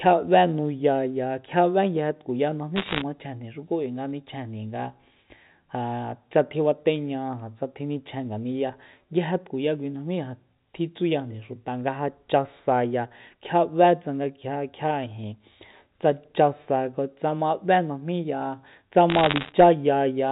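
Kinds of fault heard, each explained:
Bit errors on a digital phone line: Bits in the 8-bit logarithmic samples of the G.711 line get flipped. Each flip corrupts one sample. A hit on a high-order bit, or on the sign bit of a loud sample, throws that sample far off and makes a sharp tick. From 2.76 to 3.02 s, the ticks crowd into crackle over the speech, at an error rate of roughly two percent. A sparser burst, near one percent, runs from 19.1 to 19.52 s.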